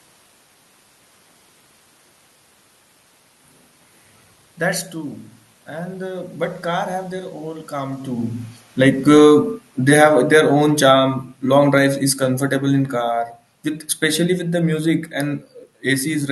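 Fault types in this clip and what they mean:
automatic gain falling: From 8.67 s to 13.26 s the speech and the room noise behind it sink together by about 11 dB. The automatic gain control judged the input too loud, or its background noise too strong, and lowered its gain gradually.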